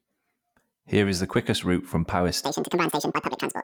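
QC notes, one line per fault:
2.45 to 3.64 s, audio read two samples at a time (double speed): from here to the end, the speech suddenly runs twice as fast and jumps a full octave, 12 semitones up, giving it a chipmunk sound. The reader is treating each pair of samples as a single frame, as if the stream had two channels or samples twice as wide. Half the data gets skipped, so timing and pitch double.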